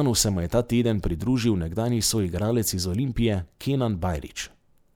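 No technical faults are audible.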